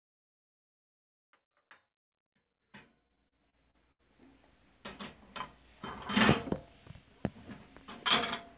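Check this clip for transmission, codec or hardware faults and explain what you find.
One transmission fault is audible: the sound stutters through a short stretch in the middle.

From 3.08 to 4.01 s, repeated stalls (stutter) make the audio drag and hiccup through six brief holds, the longest about 73 ms. Packets arrived late, emptying the jitter buffer. Each time, the receiver stretched the last sound for about 190 ms in total, so nothing is lost, but the flow stumbles. This happens while the smooth fade-in is still rising toward 4.55 s, and everything sits under the 4 kHz ceiling of the G.711 call codec.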